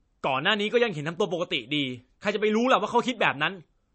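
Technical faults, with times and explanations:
Throughout, low-bitrate audio saved at a high bitrate: the speech has nothing above 8.3 kHz and a dull top end. That's likely an earlier low-bitrate MP3 pass, around 34 kbit/s, whose losses a later high-bitrate MP3 encode simply carried over.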